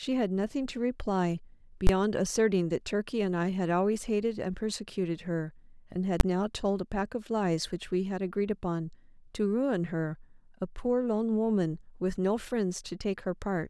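Speech clip with two bursts of invalid numbers at full scale, from 1.87 to 1.89 s (20 ms) and at 6.2 s (10 ms). Invalid calculation results pinned the output to full scale, so each short block is heard as a single loud bang.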